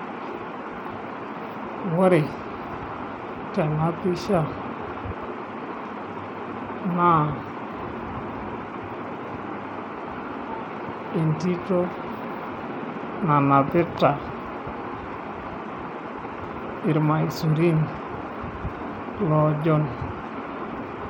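A speech clip. Throughout, the treble flickers and drops out under a gritty noise. This is likely Bluetooth SBC compression with a starved bit pool, fitting about 96 kbps.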